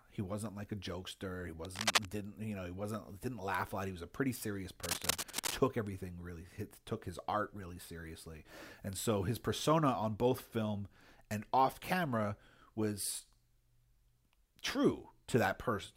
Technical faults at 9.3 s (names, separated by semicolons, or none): none